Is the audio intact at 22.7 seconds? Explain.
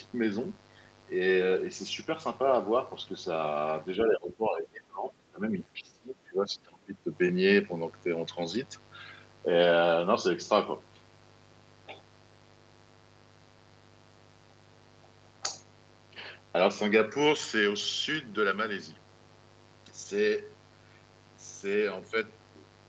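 No, mains buzz runs through 22.7 s as it does through the whole clip. Switching spikes at twice the 50 Hz mains rate leak in, stacking harmonics up into the kilohertz range. The result is a steady, raspy buzz roughly 25 dB under the speech.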